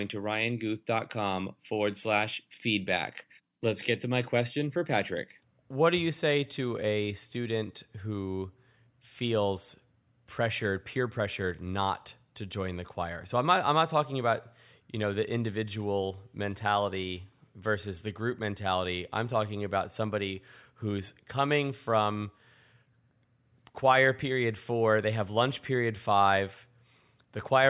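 No technical faults are audible.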